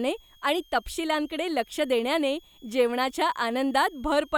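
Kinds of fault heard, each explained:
Switching supply whistle: a switch-mode power supply in the recording chain is running at an audible rate, so its switching tone leaks into the audio as a thin, high whistle. It persists through the whole speech clip, wandering in pitch between about 3.2 and 3.4 kHz as the supply's operating point shifts, and sits roughly 35 dB below the speech.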